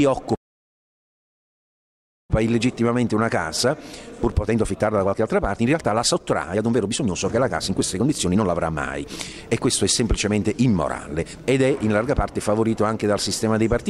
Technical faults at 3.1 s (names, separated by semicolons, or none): jitter buffer speed-up